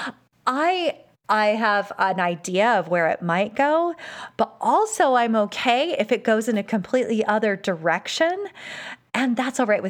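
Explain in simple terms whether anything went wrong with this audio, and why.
Nothing went wrong here.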